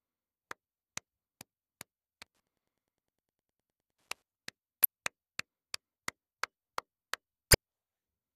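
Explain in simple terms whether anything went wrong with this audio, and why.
From 2.22 to 4.22 s there's a faint, steady ticking under the sound, well below its level, about ten ticks a second. That's Wi-Fi interference. A nearby Wi-Fi radio sends out a short beacon every 102.4 ms, and the audio circuit picks those bursts up and turns them into clicks. The ticks come at such a regular rate because the beacon timing is fixed, which is why it sounds almost mechanical.

Two short glitches come later, at 4.83 to 4.86 s and again at 7.52 to 7.55 s. Each is a quick blip, around 30 ms long. This is damaged data in a compressed stream. A small chunk of the compressed file was corrupted, so the decoder couldn't make sense of those frames. It loses its place and has to hunt for the next clean starting point, and that stumble is what you hear as the brief glitch.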